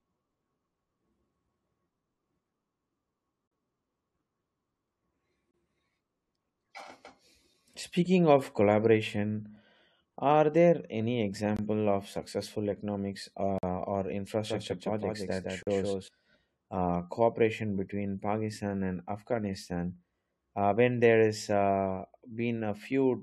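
A speech recording in which short, hard-edged holes of silence interrupt the sound at 3.48–3.51 s, 5.51–5.54 s, 7.54 s, 9.56 s (between "of collaboration" and "are there any"), 11.57–11.59 s, 13.58–13.63 s and 15.63–15.67 s. These are gaps between stream segments: the timestamps of consecutive 2-second segments fail to meet, and the player fills each gap, between roughly 5 and 47 ms, with silence. Nothing is lost. From 14.46 to 16.08 s a second full-band copy of the speech trails the original by about 150 ms, around 5 dB quieter, dry and with abrupt onset and end. This doubled audio track is likely the same signal captured a second time through a slower path and mixed back in.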